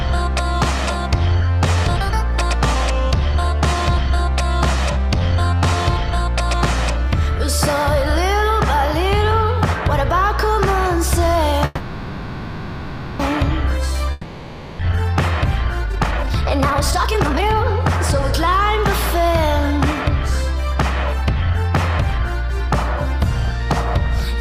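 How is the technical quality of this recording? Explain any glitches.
The recording has three network-related glitches between about 11.7 s and 24.1 s.

From 11.65 to 13.21 s there is a call audio freeze. The last sound is stretched into a fading buzz or hiss for 1.54 s, and then the audio resumes intact. The likely cause is delayed packets draining the jitter buffer.

From 14.11 to 14.81 s a long network dropout replaces 0.68 s with fading filler. That stretch never returns, and playback resumes further along, likely because the packets were lost outright.

From 15.84 to 24.07 s there is a jitter buffer speed-up. The receiver trims pitch-period slices to shed the built-up delay, roughly one and a half seconds in total. The audio runs at 118% speed with unchanged pitch and sounds hurried.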